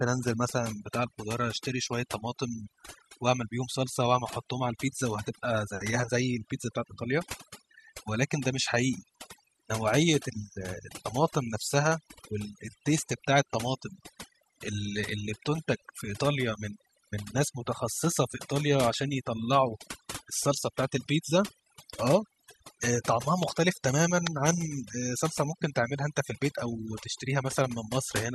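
Throughout, overdone noise removal cuts frequency bands near the noise floor too deeply, leaving near-silent, twinkling gaps.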